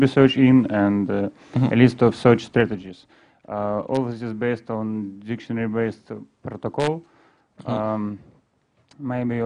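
From 2.55 to 2.91 s there's zipper noise: the level drops by around 10 dB in unsmoothed 1 dB jumps, something like thirty a second, and each jump leaves a tiny click, so you hear a quick ticking zip riding on the sound during the fade.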